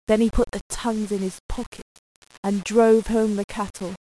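From start to finish the speech carries grainy, buzzy distortion, likely low bit depth without dither, rounded to roughly 6 bits, with error around 25 dB below the signal. Unlike steady hiss, the grit follows the speech, roughening softer syllables and making the quietest moments drop to silence or sputter.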